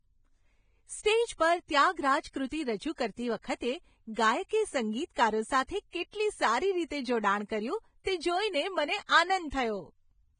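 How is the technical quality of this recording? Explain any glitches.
Heavily compressed speech throughout, with one brief smeared attack.

Throughout, the speech sounds hissy and grainy, with nothing above 9.7 kHz. This is likely Vorbis compression at a low bitrate, around 20 kbps, where coarsely quantised treble turns into noise.

From 8.04 to 8.06 s, a short hiss of about 22 ms precedes a sharp attack, softening it. This is pre-echo: the codec spreads the attack's quantisation noise across the whole block, so it also fills the quiet moment just before.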